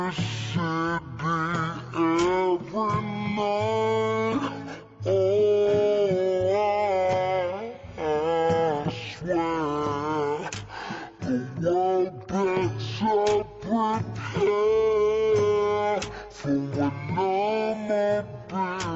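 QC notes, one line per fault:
throughout: wrong sample rate. The whole clip runs at half speed and sits a full octave low, 12 semitones down, with speed and pitch falling together because the samples are clocked out at half the rate they were captured at, with no conversion in between. The 0.5 ratio fits material recorded at 44.1 kHz but played back at 22 kHz, so every event is stretched to twice its length and every frequency is halved.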